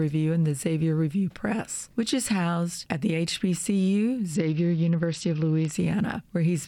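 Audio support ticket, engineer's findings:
Treble dulls, gritty noise rises, 4.35 to 5.73 s. Bluetooth SBC bit pool drop: congested link starved top sub-bands, coarse quantisation, fits pool cut 31 to 9.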